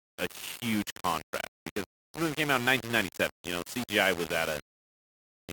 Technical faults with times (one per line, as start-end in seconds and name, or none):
0.00-5.53 low bit depth without dither